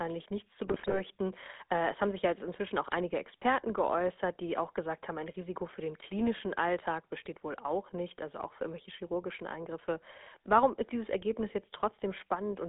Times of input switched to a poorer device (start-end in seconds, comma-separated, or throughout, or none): none